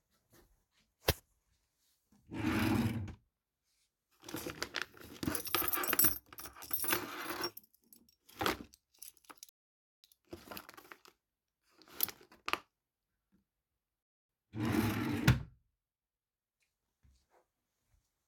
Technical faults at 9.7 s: rebuffering stall

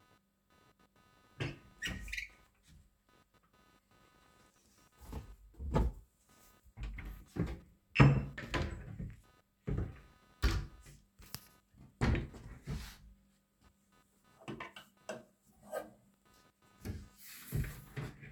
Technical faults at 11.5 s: computer activity noise

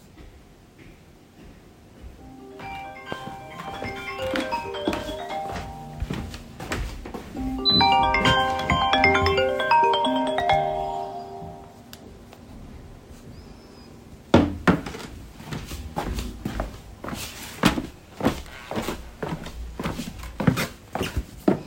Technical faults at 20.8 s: none

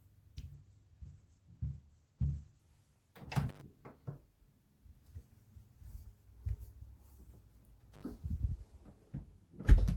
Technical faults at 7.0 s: none

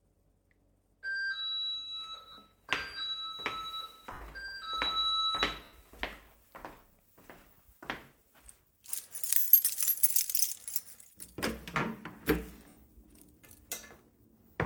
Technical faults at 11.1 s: none

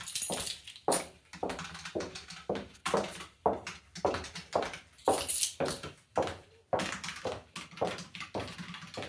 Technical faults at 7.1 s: wrong sample rate

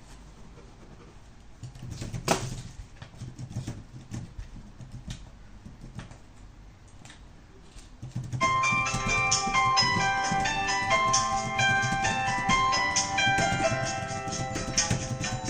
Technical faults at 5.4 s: none

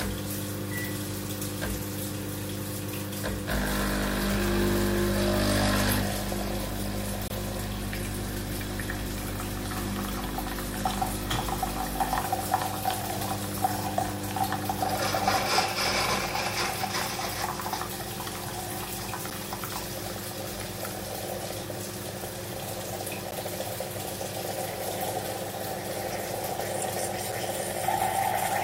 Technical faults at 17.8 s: none

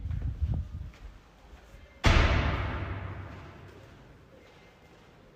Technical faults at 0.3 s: none

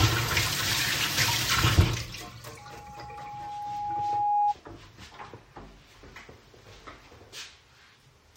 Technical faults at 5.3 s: none

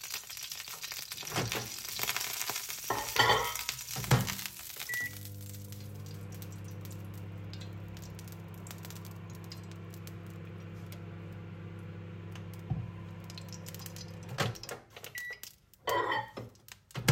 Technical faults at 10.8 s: none

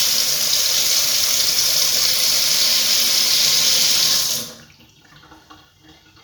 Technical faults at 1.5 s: none

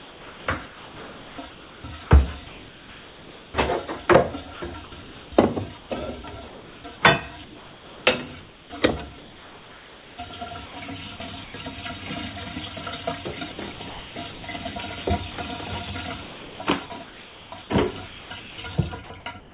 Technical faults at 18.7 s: sound chopped by the voice detector

